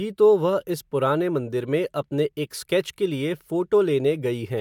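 No technical fault can be heard anywhere in the speech recording, and the signal stays intact throughout.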